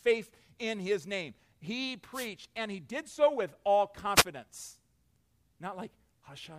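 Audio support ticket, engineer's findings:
Wireless microphone noise hit, two bursts of static: 2.12–2.28 s (about 160 ms) and 4.15–4.25 s (about 100 ms). Short swish over the speech. Probable component: analogue FM radio link, mic transmitter to receiver. Mechanism: reflected paths cancel the carrier, signal fades, receiver noise rises and masks the speech. Spectrogram: brief broadband vertical smear over the speech harmonics. Waveform: dense noisy fuzz superimposed on the envelope at both times.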